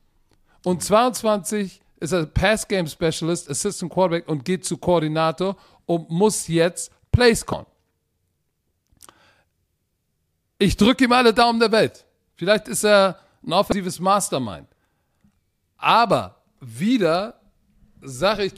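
At 7.50–7.53 s, and again at 13.69–13.72 s just after "ist er ein", damaged data in a compressed stream makes the decoder misread corrupt frames and hunt for sync. Each event is brief.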